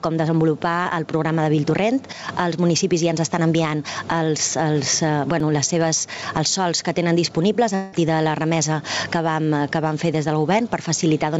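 Loud and soft parts sit closer in level, a gain swing of roughly 15 dB: gain pumping, likely from excessive input gain with a fast limiter clamping down. At 0.83 to 0.88 s a brief smear covers a short concealed packet loss; about 30 ms went missing and the receiver extended the preceding sound before blending back. At 5.40 s a tick or dip marks a block of digital silence about 5 ms long, the audio cutting out with hard edges, which fits a 256-sample buffer that wasn't filled in time. From 7.75 to 7.95 s a fading buzz or hiss replaces the audio, likely a long network dropout, with about 180 ms lost and synthetic continuation filling the gap before the sound resumes. Through the G.722 call path, nothing is heard above 8 kHz.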